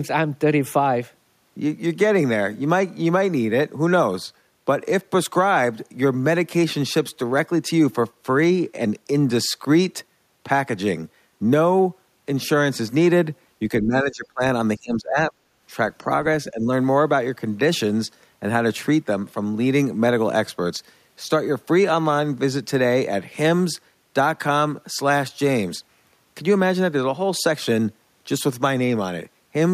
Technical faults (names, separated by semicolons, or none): speech suppressed in double talk